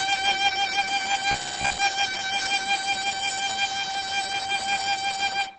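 A music clip with heavy Opus compression damage throughout. Nothing is present above about 9.1 kHz, so the top end is cut away and the sound is muffled and hoarse rather than swirly. That points to the encoder having dropped out of its music mode into its speech-oriented SILK mode at wideband bandwidth, which fits a very low rate around 12 kbps. Starving the bit budget this way is the likely cause of the dull, rough tonal quality.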